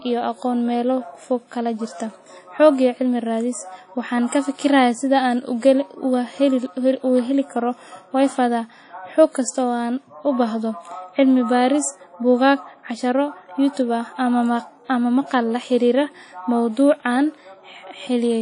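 Throughout the speech there is a ringing, washy smear with hiss that swells and fades with the signal, and nothing above 10.1 kHz. This is likely WMA compression at a low bitrate, around 32 kbps; the long-block smear distinguishes it from a simple low-pass filter.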